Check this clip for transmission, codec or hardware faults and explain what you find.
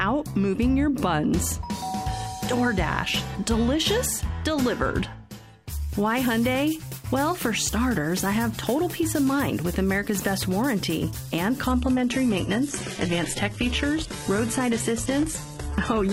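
One fault is present. Adaptive stream at a lower bitrate, from 11.67 s to the end: the stream switched without a gap to a leaner encoding, likely because the connection slowed. Content above about 11.8 kHz vanishes and coding artefacts thicken, which fits a drop from roughly 96 kbit/s AAC to 16 kbit/s HE-AAC.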